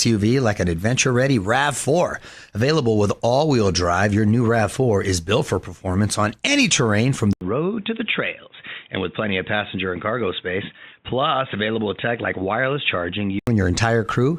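At 7.33 s, just after "on any terrain from", the input likely switches to a poorer device, leaving an 80 ms gap. Until 13.47 s the speech loses everything above 3.8 kHz, sounding dull and boxy, drops about 5 dB, and gains faint new background noise.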